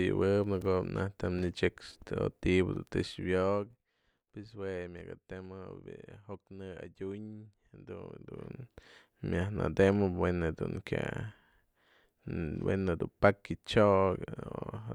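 From 3.04 to 3.92 s, the speech drops by about 15 dB with zipper noise. The gain falls in coarse steps, around thirty a second, with no smoothing. Each step clicks. From 7.98 to 8.62 s, a similar rise ticks faster, near fifty steps a second.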